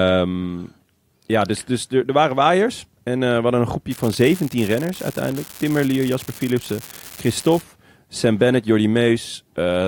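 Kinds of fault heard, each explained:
Unreliable data bit: one bit in the sample data is coming through wrong at random, so every time it flips you get a spike of the same fixed size, here about -14 dBFS. From roughly 3.91 s to 7.61 s that turns into a steady crackly fizz riding over the speech, and since the spikes don't care about the signal level, you can still hear it grinding away in the gaps between phrases.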